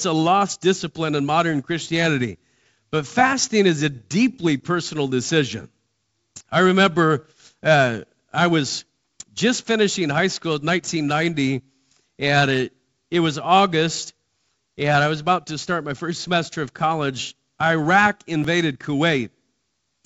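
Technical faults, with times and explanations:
14.46–18.44 s: periodic USB or driver dropouts. About three short ticks, 2.0 s apart, where a few milliseconds of speech are skipped outright as a background task stalls the bus or driver on a fixed cycle. Each abrupt splice clicks through the G.722 wideband audio.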